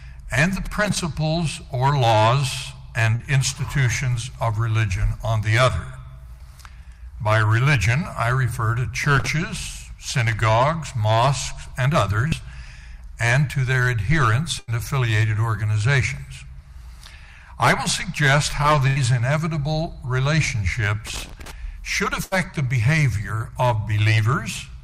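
A worn or dirty contact making and breaking in a loose connector chops the signal, giving irregular crackle from 0.64 to 1.00 s. Short concealed packet loss at 3.15 to 3.23 s and 12.28 to 12.34 s means about 40 ms never arrived in time. The receiver extended the preceding sound, leaving a brief smear or wobble.

The connector crackle returns from 9.04 to 9.27 s. Bursts of packet loss at 14.59 to 14.70 s and 18.87 to 18.99 s each drop about 80 ms. Concealment holds and fades the last sound into a buzz or hiss, then the audio resumes further on with that stretch missing.

Crackle recurs from 21.07 to 21.51 s, and a final 80 ms burst of packet loss falls at 22.24 to 22.34 s.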